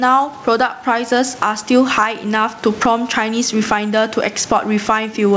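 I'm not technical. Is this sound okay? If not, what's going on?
No. The speech has gain pumping throughout. Loud and soft parts end up closer in level, and the sound is squashed. That effect likely comes from the level being set far too high and an automatic limiter pulling it back each time.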